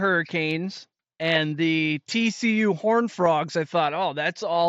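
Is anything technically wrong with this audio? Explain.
Yes. Concealed Bluetooth headset packet loss at 3.25 s: one voice packet, about 7.5 ms of audio, which fits a single lost packet on the headset link, was patched by repeating the closest-matching recent stretch of waveform, leaving only a tiny, nearly hidden blip in the speech, which passes through the mSBC headset codec up to 8 kHz.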